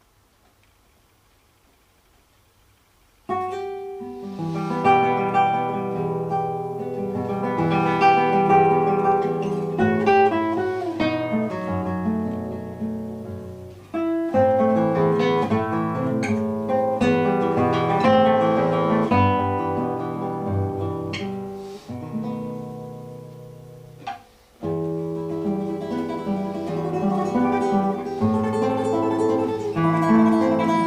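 Nothing is technically wrong with this audio; no faults can be heard anywhere in it.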